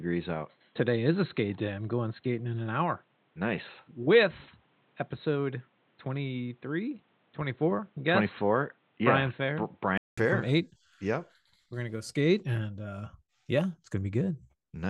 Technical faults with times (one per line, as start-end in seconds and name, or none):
0.00-10.17 input switched to a poorer device